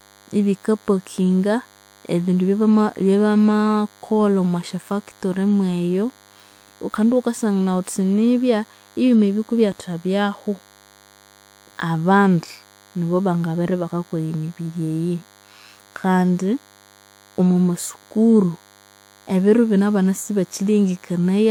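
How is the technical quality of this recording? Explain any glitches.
The recording has one fault, present from start to finish. DECT cordless phone buzz runs throughout: a nearby DECT handset or base fires radio bursts 100 times a second, which the audio circuitry rectifies into a steady 100 Hz buzz with many harmonics, sitting roughly 30 dB below the speech.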